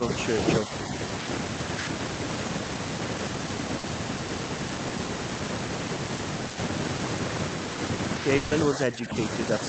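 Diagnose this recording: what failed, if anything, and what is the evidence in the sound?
Speech suppressed in double talk, at 0.00 to 0.12 s and again at 8.68 to 9.22 s. This is a call-processing fault. The speech level sags by about 10 dB in the opening tenth of a second and by about 15 dB across roughly half a second near the end. The likely cause is the echo canceller treating simultaneous far-end activity as echo. It then attenuates the near-end talker together with the loudspeaker return instead of passing it.

Short concealed packet loss, at 3.79 s and 4.87 s. This is a network fault, handled in the decoder. The first event replaces about 40 ms of audio and the second about 20 ms. Each is heard as a brief smear where the decoder extended the preceding sound from its pitch or as shaped noise, then cross-faded back into real audio.

Burst of packet loss, at 8.37 to 8.53 s. This is a network fault. 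About 140 ms of consecutive audio failed to arrive in time. Concealment carries the last sound forward and fades it rather than dropping to silence, so a voiced segment becomes a held buzz that decays. Playback then resumes further along with that stretch missing. The band-limited Opus path, with content stopping near 8 kHz, fits a wideband call setting.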